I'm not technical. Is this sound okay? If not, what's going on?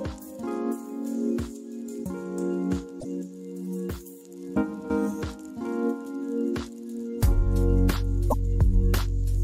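No, there are two brief glitches, at about 2.97 to 3.05 s and 8.27 to 8.34 s. Each is damaged data in a compressed stream: a few bits of the file got garbled, so the player stumbles, spits out a quick chirp or blip, then catches up again.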